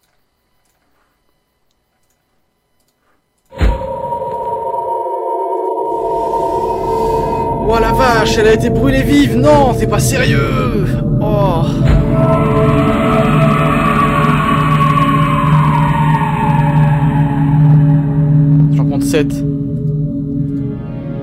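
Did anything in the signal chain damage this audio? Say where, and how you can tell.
Yes. Hard clipping at 7.70 to 10.67 s, 11.34 to 17.95 s and 18.35 to 18.65 s, overdriven by about 6, 5 and 3 dB. At the converter or a sample-format stage, peaks exceeded full scale and were sliced flat, adding bright harmonic fuzz on loud moments.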